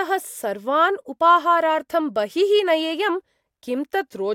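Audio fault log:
Nothing to log here; the speech comes across with no faults to report.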